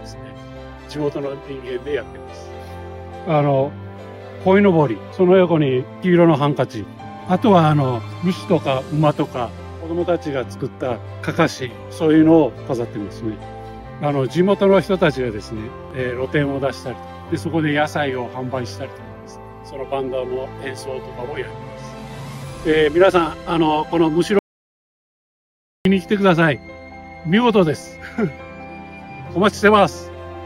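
An audio dropout to silence runs from 24.39 to 25.85 s, about 1.46 s where the sound stops mid-flow and returns abruptly, likely from a lost input. The waveform shows a dead-flat line, and the spectrogram a fully blank band, with no room tone.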